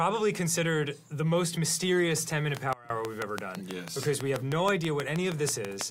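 From 2.57 s right through to 5.82 s there's a train of clicks: about twenty near-identical pops at a steady 6.2 per second, landing around 20 dB above the sound itself, so they tick away over everything, quiet gaps included. Something outside the signal was firing a pulse at a regular rate, most likely interference from nearby gear or a faulty connection or power supply.

Overlapping the start of that run, at 2.73 s, there's a sudden gain jump. The level drops by about 22 dB in a single step, and the sound and its background noise fall together, then come back at 2.90 s. That points to a likely gain setting or bit shift applied with no ramp, so you hear an abrupt hole rather than a fade.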